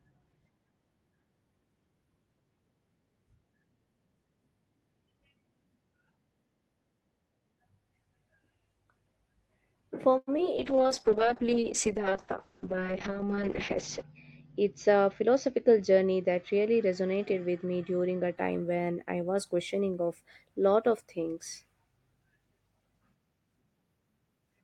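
Speech carried over an Opus call path at 32 kbps with a 12 kHz bandwidth, with a cluster of network faults around 10 s. From 10.17 to 10.29 s there is a short stall from a late packet: the jitter buffer ran dry, so the receiver held the current sound for about 100 ms before resuming at the same point, adding 100 ms of delay but losing nothing. Right after come two short concealed packet losses, at 10.37 to 10.40 s and 10.44 to 10.46 s. Each lost 20 ms; the decoder bridged part of the first by extending the preceding sound, which leaves a brief smear or wobble as the real audio blends back in. A call bitrate drop follows from 10.58 to 18.43 s, ending just before "when I". The bandwidth estimate fell and the encoder went from 32 to 7 kbps, staying at the lowest rate for about 3.4 s, while the audio bandwidth narrowed from 12 kHz to 8 kHz, so the sound turns coarse and duller. Inside that stretch, from 13.76 to 15.77 s, a jitter buffer speed-up trims an excess backlog by cutting out pitch-period slices, about a tenth of a second in total. 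That makes the audio run at 104% speed with unchanged pitch. At 19.41 s, between "when I" and "questioning of lot of", a single sharp click is heard, likely dropped samples, where a couple of samples went missing and the waveform jumped discontinuously.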